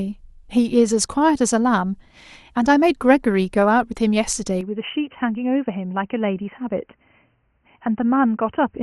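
At 4.61 s the speech abruptly changes character and stays that way to the end. Everything above 3.1 kHz disappears, so the sound turns dull and boxy, the level falls by about 5 dB, and a new, faint background noise appears well below the speech. There is no gap at the transition. The likely cause is the input switched to a poorer device, such as a second microphone or a headset's call profile.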